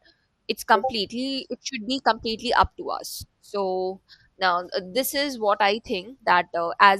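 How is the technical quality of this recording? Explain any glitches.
The quality's held back by one problem running right through the speech. It's MP2 compression, likely from an MPEG Layer II encode at a low rate, something around 80 kbps judging by the damage. Starved of bits, the upper sub-bands keep dropping out and the rest get coarsely quantised, so the voice sounds dull and gurgly, with a grainy edge.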